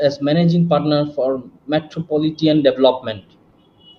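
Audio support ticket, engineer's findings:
No technical faults found in the speech recording; signal path checked and nothing requires action.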